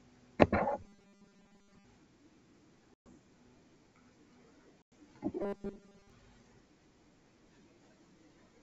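From 0.83 to 1.85 s the speech turns into a rigid, metallic buzz pitched at 200 Hz, still loosely tracking the words. This is robotic sound from repeated short buffers, likely caused by new audio arriving too seldom so the player loops its last fragment. A 200 Hz buzz means a 5 ms slice being repeated, and most of that stretch is filled with repeats while the real audio is skipped.

At 2.94 s a hard-edged hole of about 120 ms opens, and the speech returns around 3.11 s slightly distorted before steadying. This is packet loss on an ADPCM call. Several packets went missing and were replaced by silence, which left the decoder's adaptive predictor and step size out of step with the sender's until they caught up.

The same packet loss on an ADPCM call recurs from 4.82 to 4.92 s, with a gap of about 100 ms and the same unsettled re-entry. From 5.42 to 6.10 s the robotic sound from repeated short buffers comes back at the same 200 Hz, again with most of the stretch made of repeats. 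The G.722 wideband coding underneath leaves the upper band reaching toward 7 kHz with at most a faint hiss.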